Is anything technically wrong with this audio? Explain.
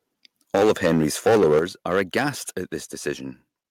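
Yes. The speech has two related faults: clipping from a microphone overload, and sudden drops where the microphone volume was stepped down.

The microphone overload runs from 0.54 to 1.64 s and again from 1.9 to 2.28 s. The loudest syllables acquire a harsh, crackling edge because their waveform tops are flattened. The likely cause is an input level driven past the converter's ceiling, about 13 dB over in the first stretch, with roughly a tenth of the samples clipped. The second stretch is milder, about 6 dB over with only a small fraction clipped. Unlike a volume change, this is distortion riding on the peaks, not a shift in overall loudness.

The microphone volume stepped down twice, at 0.56 s by about 2 dB and at 1.59 s by about 8 dB. Each time, the speech and the background noise beneath it fall in level together, instantly. The likely cause is the call software reacting to the overloaded peaks by lowering the input volume in a single step. 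What separates this from the clipping is that the drop itself is clean: the whole sound gets quieter at once, with no added crackle.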